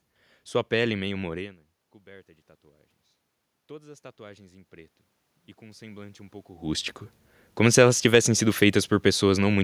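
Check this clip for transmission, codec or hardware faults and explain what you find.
Automatic gain rising occurs twice in this speech clip, from 3.67 to 5.01 s just after "morena coberta de tatuagens" and from 5.58 to 6.97 s just before "como se elas tivessem". In the first stretch the input level drops by about 24 dB, so the gain control slowly raises its gain by about 5 dB; in the second it raises its gain by about 4 dB. Because the gain acts on the whole signal, the voice and the room noise swell together over each stretch.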